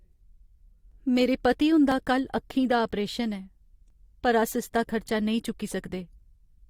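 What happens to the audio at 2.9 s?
At 2.91 s the speech skips. This is an overlap between stream segments. Two adjacent segments, which point to a segment length of about 1 s, carry time stamps that overlap. The player treats the overlap as doubled material and discards it, but that sound was never repeated. About 15 ms of real speech is lost, and the waveform jumps straight across the gap. You hear a tiny skip.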